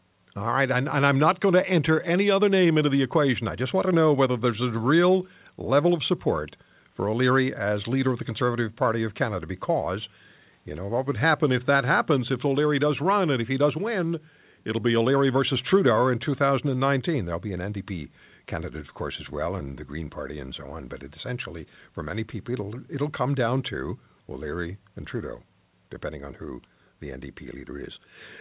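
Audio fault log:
Nothing to log here: the speech comes over a WebRTC call path with nothing above 4 kHz, which fits G.711 A-law, and no faults turn up anywhere in it.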